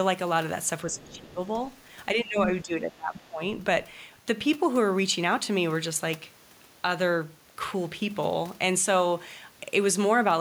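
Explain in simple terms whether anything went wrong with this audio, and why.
Twice the echo canceller most likely got confused when both sides talked at once, and turned everything down. This is speech suppressed in double talk: from 0.84 to 1.41 s and again from 2.14 to 3.42 s, the talker's voice dips sharply and sounds partly cut away.

During the first of those moments, the echo canceller likely failed to remove all of the other side's voice coming from the loudspeaker. That is the other side's voice leaking through, heard faintly in the background between 1.04 and 1.21 s.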